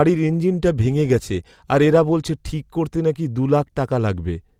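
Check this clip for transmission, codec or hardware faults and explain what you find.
Nothing in the speech signal points to a transmission, codec or hardware fault.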